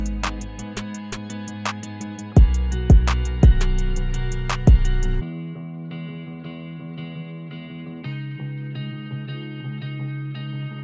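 No technical faults can be heard anywhere in the clip. Nothing in the audio calls for a timestamp or a note of damage.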